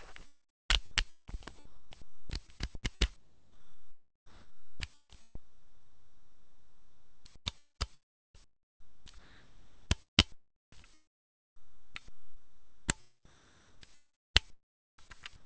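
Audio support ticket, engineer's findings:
Sound chopped by the voice detector, 0.10–13.87 s and 5.35–15.45 s. Likely sender VAD gating, with about 3.3 s and 7.6 s swapped for comfort noise. Spectrogram shows flat, featureless noise patches between real content; waveform shows abrupt level steps. Band ends at 8 kHz, consistent with the G.722 call path.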